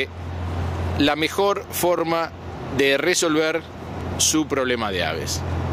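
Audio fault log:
4.01 s, overlapping chunks: right around here there's a brief stutter, a tiny tick where about 20 ms of audio plays twice. What's going on is that the sound was handled in blocks, and this one kicked off a little before the previous block had finished, so the tail of one and the start of the next overlap. With blocks about 2 s long, the join lands at 4 s, and that doubled sliver is what your ear catches as a hiccup.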